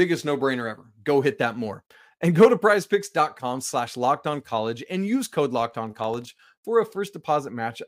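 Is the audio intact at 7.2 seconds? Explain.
Yes, at 7.2 seconds the audio is intact, with no dropout, click, distortion or other fault at that moment.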